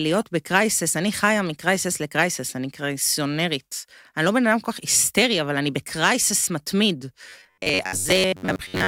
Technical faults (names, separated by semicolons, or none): robotic sound from repeated short buffers